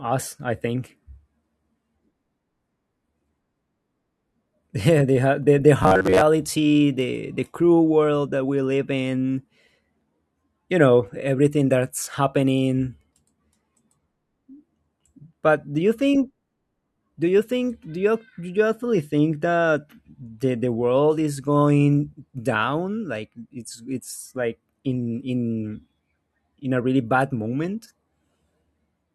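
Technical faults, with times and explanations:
5.83 to 6.25 s, robotic sound from repeated short buffers: just after "the the", the speech turns to a rigid metallic buzz near 94 Hz for most of this stretch, likely because late audio was covered by looping roughly 11 ms segments while real audio was skipped.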